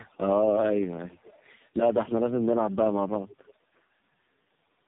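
Throughout, the speech suffers tandem speech coding: it was decoded and re-encoded by three speech codecs in turn, the final stage sounding like AMR-NB. Each coder compounds the previous damage, leaving it rough, muffled and warbly, with nothing above 3.8 kHz.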